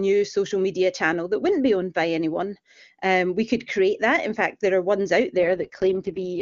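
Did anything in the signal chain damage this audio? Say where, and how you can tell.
Yes. AMR rate drop, network-driven: from 5.38 s, after "there are ones out", AMR-WB falls from 23.85 to 6.6 kbit/s. The speech turns rough and synthetic, with no gap or bandwidth loss.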